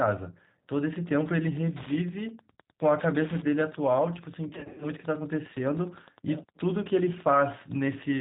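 Throughout, the speech carries the rough, slightly synthetic texture of G.729 codec coding, which points to an 8 kbit/s codec. A spectrogram shows nothing above 4 kHz, and the harmonics look smeared where the pitch predictor and a few pulses rebuild each 10 ms frame.

From 0.69 s to the end, Wi-Fi interference adds a steady tick every 102.4 ms, well below the speech, as a nearby radio's beacon is rectified by the audio circuit. The waveform shows evenly spaced spikes, and the spectrogram shows thin vertical lines at that spacing.

Between 4.49 and 4.86 s, VoIP packet loss concealed by the speech codec stretches the sound into a buzzy tone or coloured noise that fades. About 190 ms went missing across 320 ms, with the longest gap 60 ms, which fits roughly nineteen 10 ms frames. The spectrogram shows frozen, repeating bands that lose energy, and the speech stays weak for a while after packets resume.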